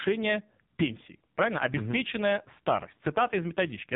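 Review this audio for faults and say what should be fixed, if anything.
The speech has passed through an AMR narrowband mobile codec for its whole length. Nothing above 3.8 kHz survives, so sibilants and consonant detail are gone and the sound is boxy. The codec rebuilds each 20 ms frame from a vocal-tract model driven by a few pulses. Here the damage is heavy. The voice sounds buzzy and synthetic, which fits a low bitrate near 5.9 kbps. To prevent it, record or transfer over a wideband path instead of a narrowband mobile call.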